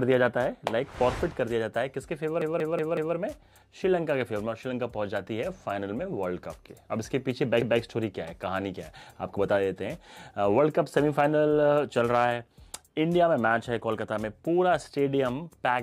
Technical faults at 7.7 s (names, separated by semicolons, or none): repeated buffer